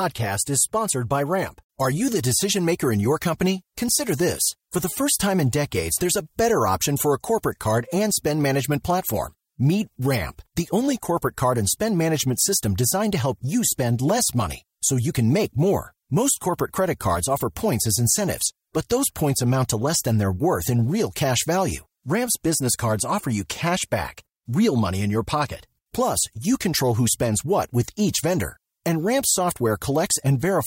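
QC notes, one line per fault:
No faults heard in this speech clip.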